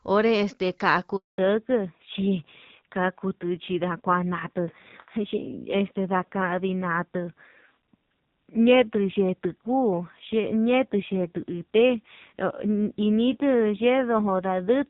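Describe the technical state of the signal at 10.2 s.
At 10.2 s the audio is in a fallback to narrowband that began at 1.38 s and continues to the end. The call has dropped from HD Voice to an older low-rate narrowband codec, so the speech sounds dull and rough. On a spectrogram, energy stops abruptly at 4 kHz, with empty space above.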